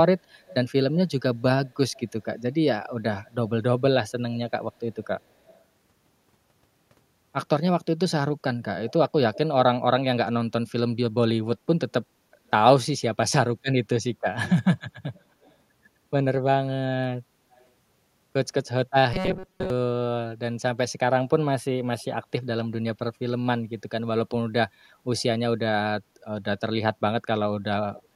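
From 0.45 to 2.02 s there's an echo leak, a faint delayed copy of the speech about 230 ms behind, again at 5.04–5.59 s at the same delay and at 8.89–9.38 s (about 280 ms), then 12.47–18.68 s at about 310 ms. It sits roughly 20 to 30 dB down, likely a far-end loudspeaker whose echo canceller let some through. From 19.14 to 19.70 s comes robotic sound from repeated short buffers: most of the audio is likely replaced by loops of about 5 ms, giving a rigid 188 Hz metallic buzz. The echo returns from 21.99 to 28.03 s, now about 330 ms behind.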